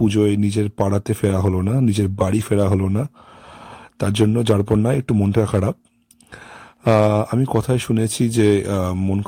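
A brief rough, noisy patch at 1.29 s and again from 2.39 to 2.41 s, each about 20 ms long with no gap, is a lost packet rebuilt from error correction: each loss, which fits a single packet, was filled from a low-bitrate copy carried in the next packet.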